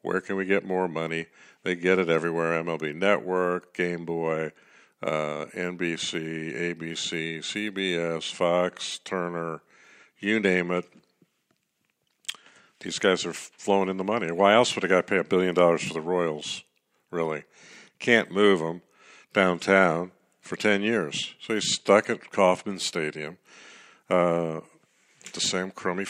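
No technical faults are audible.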